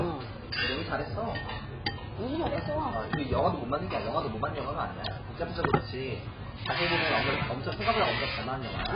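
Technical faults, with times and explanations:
Throughout, AAC compression. Nothing is heard above 5 kHz, so the audio sounds dull and closed in. The damage is heavy. Sustained sound warbles, and high detail turns fizzy and smeared. The likely cause is AAC-LC coding at a very low rate, and the sound fits about 12 kbps. At that rate the encoder drops the top band entirely. It spends its few bits on the strongest spectral lines and leaves gaps between them.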